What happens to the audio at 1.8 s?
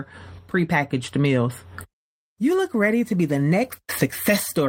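Nothing goes wrong at 1.8 s; the speech carries on intact through that moment.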